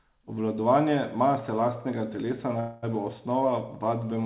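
At 2.6 s the speech stalls into a fading buzz until 2.85 s, a call audio freeze. Delayed packets likely emptied the jitter buffer. Nothing is lost, so the speech resumes about 0.22 s late. The narrow call band tops out near 4 kHz.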